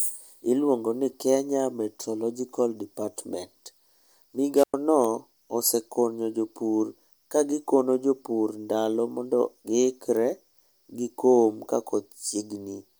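At 4.54 s the speech hits a wireless microphone squelch dropout. The radio signal fades, hiss rises, and the receiver mutes for about 104 ms before the speech returns at 4.74 s.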